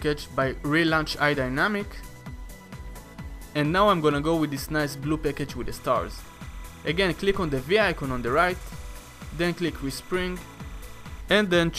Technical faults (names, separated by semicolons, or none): timecode bleed